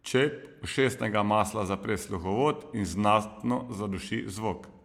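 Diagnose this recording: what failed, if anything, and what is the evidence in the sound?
Nothing failed at any stage of the chain, and the speech carries no audible defect to trace back to wiring, conversion, processing, transmission or playback.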